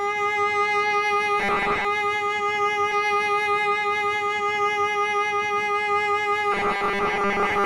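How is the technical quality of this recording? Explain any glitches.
The recording has clear glitches: two stretches of robotic buzz and one repeated section of the music.

Robotic sound from repeated short buffers appears from 1.40 to 1.85 s and again from 6.52 s to the end at 7.66 s. The music turns into a rigid, metallic drone locked at 200 Hz while still loosely tracking the sound underneath. The likely cause is a playback path starved of new audio, looping the last 5 ms for most of each stretch. A fixed buzz pitch distinguishes this from crackle or dropouts, which break the sound without imposing a tone.

Stream segment repeated occurs from 2.91 to 4.91 s. The player went back and played the same 2 seconds of music a second time, adding 2 seconds to the playback, with a small blip at the jump back. A repeated segment is recognisable because it is a full stretch of intact music heard twice. 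A stutter or buffer loop instead repeats tiny fragments that sound distorted.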